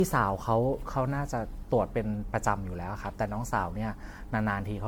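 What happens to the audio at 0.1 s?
At 0.1 s you're already hearing generation loss, which runs through the whole clip: swirly, hollow, smeared speech with soft attacks and nothing above 19.9 kHz. It likely comes from around ten passes through MP3 near 96 kbit/s, each re-quantising on a fresh frame grid.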